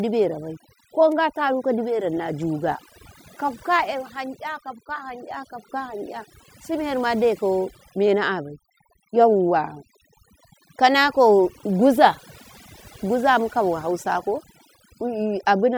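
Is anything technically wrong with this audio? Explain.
Yes, the speech suffers from overdone noise removal throughout. Bands near the noise floor are gated off, leaving a spectrogram of speckled holes, silent gaps flecked with twinkling bits, and quiet parts of the voice pulled down with them.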